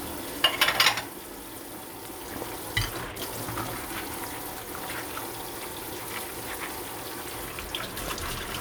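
A recording of everyday sound carries two loud pops, single sharp thumps at 2.42 to 2.44 s and 8.08 to 8.10 s, each standing roughly 10 dB above the surrounding audio, which continues underneath. The likely cause is a brief voltage spike from a plug, switch, static or driver glitch.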